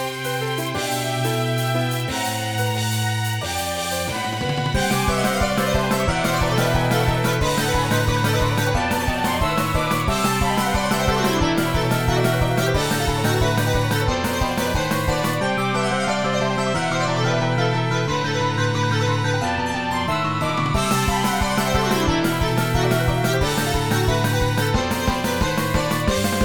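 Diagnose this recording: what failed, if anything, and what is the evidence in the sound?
Nothing stood out on listening that would point to a failure at any stage of the chain.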